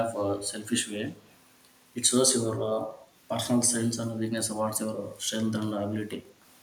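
At 0.62 to 0.73 s and again at 1.07 to 1.35 s there is an echo leak: a faint copy of the speech trailing the original by about 186 ms and sitting roughly 35 dB below it. The likely cause is a far end playing the call over a loudspeaker, where the echo canceller failed to fully remove what its microphone picked up and returned that residue down the line.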